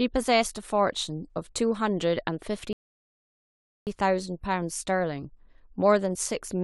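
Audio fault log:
2.73–3.87 s, rebuffering stall: the speech drops to silence for about 1.14 s while the player waits for more data, then picks up exactly where it stopped.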